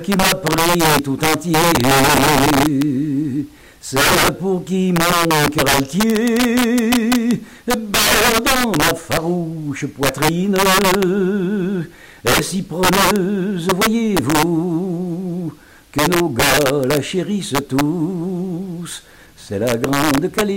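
Throughout the clip, integer overflow: the signal was driven about 11 dB past full scale, and the roughly 5% of samples that went over wrapped to the opposite extreme instead of being held flat. Each loud moment produces violent, splintering cracks, far harsher than clipping's duller, flattened distortion.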